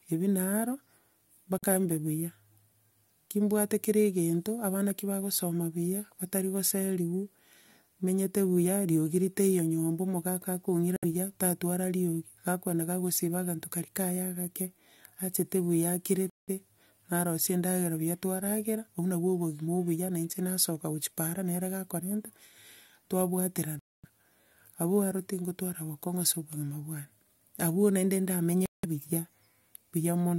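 A likely Bluetooth stall, repeated five times, interrupts this speech clip: the wireless link held packets back, the receiving buffer emptied, and playback froze until the delayed audio arrived. Each time the sound drops to silence, then resumes where it stopped or slightly later: at 1.58 s for about 47 ms, just before "mbe buya"; 10.96 s for 64 ms; 16.30 s for 181 ms, right after "achete buya"; 23.79 s for 244 ms; and 28.66 s for 178 ms.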